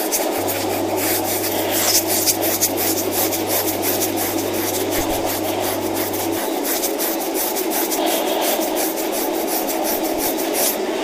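Mains hum runs from 0.38 to 6.38 s: power-line interference, likely from a ground loop or nearby transformer, adds a steady 50 Hz tone sitting roughly 20 dB below the sound.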